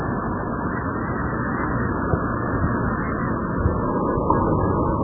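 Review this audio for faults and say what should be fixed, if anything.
Throughout the clip the top end stops dead at about 2.2 kHz, and what remains is heavily watery and swirling, with faint detail flickering in and out and transients smeared. This is likely MP3 compression at a very starved bitrate, which fits a setting around 8 kbps: the encoder drops the treble and zeroes weak frequency lines from frame to frame. A plain low-pass filter would also dull the sound but would leave it stable, without the churning texture. To prevent it, encode from the original at a far higher bitrate or keep an uncompressed master.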